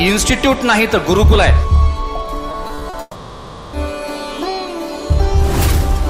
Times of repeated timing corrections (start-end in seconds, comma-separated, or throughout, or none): none